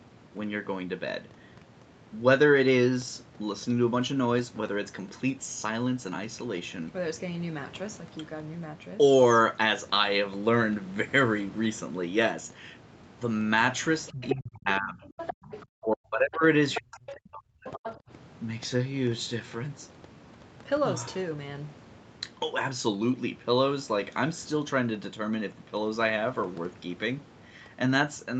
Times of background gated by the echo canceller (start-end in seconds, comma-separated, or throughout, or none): 15.33-15.44, 17.98-18.09